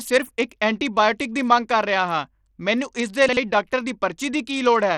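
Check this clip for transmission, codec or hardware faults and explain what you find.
Two faults are present: codec damage across the whole speech clip, and one jumbled moment near the end.

Throughout, the treble is thin and flickers, and a gritty noise rides on the speech. The likely cause is Bluetooth SBC compression at a low bitrate, around 80 kbps. Its few sub-bands starve the top bands of bits and coarsely quantise the rest.

From 3.29 to 3.37 s, between "ਹਾਂ ਮੈਨੂੰ ਇਸ ਦੇ" and "ਡਾਕਟਰ ਦੀ", chunks play out of order. A block of about 43 ms arrives one chunk late and plays after its successor. Nothing is lost, but three hard joins give a brief garbled stutter.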